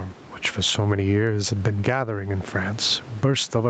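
Throughout the speech, the gain swings by around 15 dB, leaving the level squashed and flat. This gain pumping likely comes from microphone gain set far too high, with a fast limiter clamping each peak.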